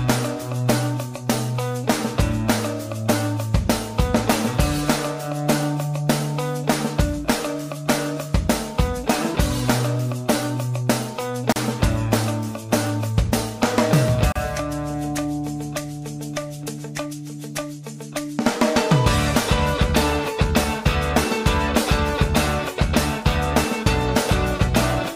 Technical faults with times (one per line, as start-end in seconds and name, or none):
11.52-11.56 gap at a join of encoded pieces
14.32-14.35 gap at a join of encoded pieces